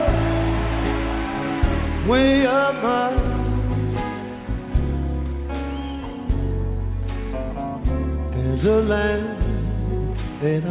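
No technical faults can be heard anywhere in the audio.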